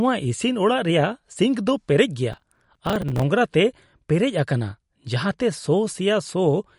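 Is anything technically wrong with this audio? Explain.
Yes, there are two faults.

Processor overload crackle, from 2.33 to 3.23 s: the processing could not keep up, and small audio buffers, which the sound suggests were around 5 ms each, kept missing their deadlines back to back, a few dozen in a row. Each miss was filled with a stale fragment of earlier audio joined with hard edges, so the speech picks up a gritty, tearing crackle across that stretch that clears once the load eases.

MP3 compression throughout, likely at a low bitrate in the region of 48 kbps. Nothing reaches above 11.2 kHz, so the speech sounds dull and capped in the treble. The encoder is short of bits, so quieter frequency components drop in and out from frame to frame. This leaves a plainly audible watery swirl, with metallic chirps on sibilants and softened, smeared onsets.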